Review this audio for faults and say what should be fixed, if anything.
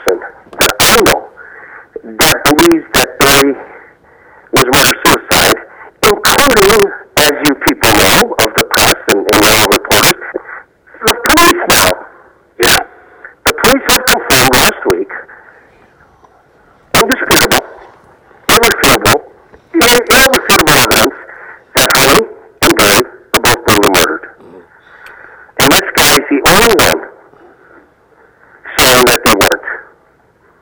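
Violent, sharp cracks burst out on the loudest moments across the whole clip, harsher than ordinary clipping. This is integer overflow: with the signal driven about 10 dB past full scale, a small share of samples, around one in twenty, wrapped to the opposite extreme instead of being limited. To prevent it, use saturating arithmetic or a limiter so that gain stages and sums clamp at full scale rather than wrapping.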